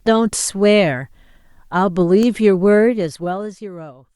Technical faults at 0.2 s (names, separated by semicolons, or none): none